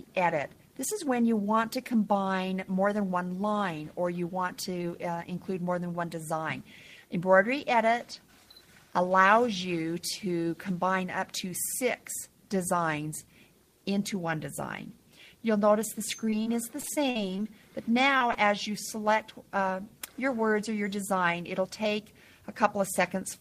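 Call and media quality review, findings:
Repeated packet loss (robotic sound), 16.25–17.40 s: choppy stretch with pieces missing. The jitter buffer/PLC is patching ten holes in quick succession, longest 48 ms, roughly a fifth of the span synthesised. Network side dropping or delaying packets in a burst.

Short concealed packet loss, 18.18–18.22 s and 18.32–18.36 s: two quick smeared blips about 20 ms each. Decoder extended the preceding sound to cover the missing audio, then crossfaded back. Tail end of the same loss burst, probably.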